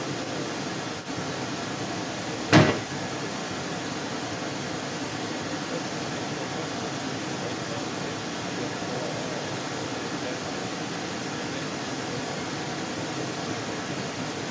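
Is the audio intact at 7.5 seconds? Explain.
No. Other side's voice leaking through runs from 0.0 to 14.5 s, a second voice about 5 dB louder than the talker, likely from incomplete echo cancellation. A spectrogram shows overlapping harmonic patterns below 8 kHz.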